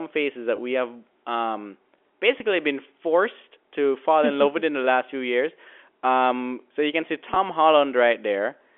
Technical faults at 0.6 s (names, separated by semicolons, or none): packet loss with pitch repetition